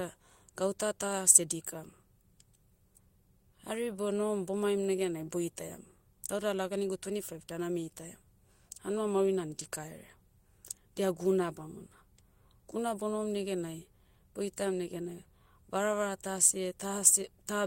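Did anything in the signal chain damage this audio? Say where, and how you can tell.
Yes, a lost packet rebuilt from error correction, at 9.59 s: no gap, just a rough, noisy 20 ms. The next packet's low-bitrate copy covered the network loss.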